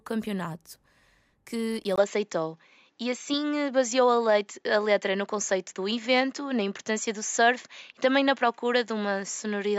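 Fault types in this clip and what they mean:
Input switched to a poorer device: at 1.96 s the speech drops out for about 20 ms and returns duller, with nothing above 7.6 kHz and a faint new noise floor, roughly 55 dB down. The level stays the same. That abrupt, lasting change of band and tone, rather than gradual filtering, points to a likely device switch.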